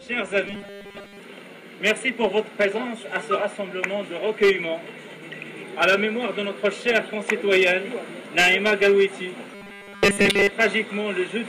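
From 0.47 to 1.20 s and 9.55 to 10.51 s, robotic sound from repeated short buffers gives a rigid 200 Hz buzz, likely from 5 ms chunks replayed while most real audio is skipped. Spectrograms show even 200 Hz harmonic stripes; waveforms show identical repeating cycles.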